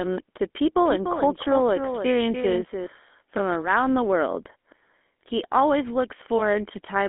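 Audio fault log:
Throughout: GSM full-rate codec. The speech has a plainly audible buzzy, gravelly roughness. This codec models the vocal tract and drives that model with a sparse, regularly spaced pulse train instead of the real excitation. Fine detail is lost, and the pulses leave a grainy texture. The sound fits a 13 kbps full-rate channel. The band runs from about 250 Hz to 3.4 kHz, and nothing survives above 3.8 kHz, so the speech sounds thin and dull.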